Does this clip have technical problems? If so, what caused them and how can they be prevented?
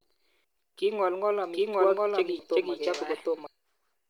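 Yes. Sample clock jitter runs through the whole recording: the converter clock wanders by around a microsecond, so samples land slightly off time. This adds a fine hiss or roughness, roughly 45 dB below the speech, that grows on loud and bright sounds and disappears in pauses. A stable, low-jitter clock or a converter locked to a clean reference prevents it.

Damaged data in a compressed stream shows up as brief chirps or blips at 0.44 s and 2.39 s. At each point, corrupted bytes made the decoder misread frames, lose sync and skip ahead to the next valid header. Checksummed transport and complete, verified file transfers prevent it.

A doubled audio track plays from 1.54 s to 3.47 s. A second, full-band copy of the speech trails the original by roughly 0.7 s at about the same level, with no reverberant tail, and it begins and ends abruptly. The likely cause is the same signal being captured again through a slower path. 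Routing each source to the recorder only once prevents it.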